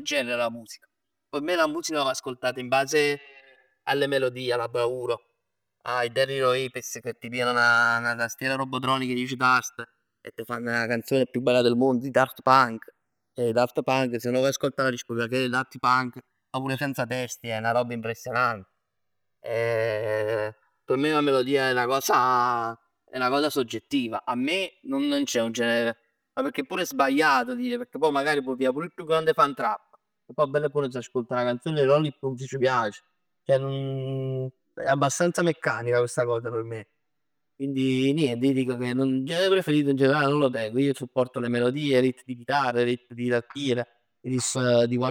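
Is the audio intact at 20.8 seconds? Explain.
No. At 20.8 seconds the clip has channels drifting apart, present throughout. The two channels run on clocks a few hundred ppm apart, so their offset slides toward roughly 10 ms. Summed to mono, this gives slow flanging, and a spectrogram shows comb notches sweeping gradually.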